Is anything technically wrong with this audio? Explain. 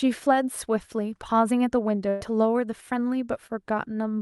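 Yes, there are two packet-loss faults in this speech.

From 2.09 to 2.23 s there is a burst of packet loss. The last sound is drawn out for about 113 ms, fading as it goes, before speech resumes. The receiver stretched the last sound to cover the gap, so about 120 ms of the speech is gone.

From 3.47 to 3.51 s there is a short concealed packet loss, heard as a brief smear or wobble. The decoder lost about 20 ms and covered it with about 22 ms of extrapolated sound blended back into the real audio.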